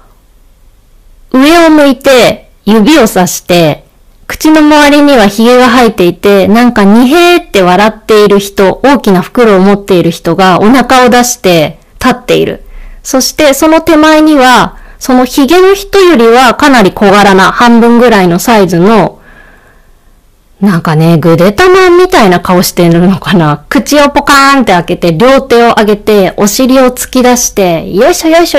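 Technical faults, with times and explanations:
Throughout, hard clipping: the speech is driven about 21 dB past what the signal path can carry, so roughly a third of all samples are sheared off flat at the ceiling. Those squared tops spray harmonics high into the spectrum, giving a constant harsh, buzzy fuzz on every loud syllable rather than occasional crackles. Unlike soft saturation, which rounds peaks and sounds warm, the edges here are abrupt and gritty, and the distortion stays pinned to the level of the sound.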